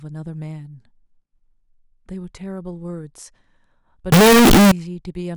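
From 4.12 to 4.72 s the speech turns loud, harsh and near-square, likely float read as integer, with 32-bit float samples decoded as integers.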